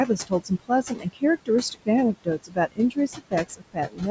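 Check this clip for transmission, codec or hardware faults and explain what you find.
Two related faults, both from a noise suppressor acting on speech.

Noise suppressor artifacts run through the whole clip. The background sinks away in the gaps and swells back under the talking. The suppressor estimates the steady room noise, about 13 dB below the speech, and pulls down each band it judges to be noise, frame by frame, here by about 21 dB.

Speech cut by the noise suppressor happens four times: 0.27 to 1.23 s, 1.71 to 1.88 s, 2.14 to 3.33 s and 3.49 to 4.02 s. In these stretches parts of the speech go faint or swallowed, losing quiet sounds and tails, by about 18 to 21 dB at the deepest. The affected portions are short, from a tenth of a second up to about half a second in each span. The suppressor mistook those soft speech components for background and turned them down with the noise. 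The call microphone processing, with nothing above 8 kHz, shapes the band alongside this.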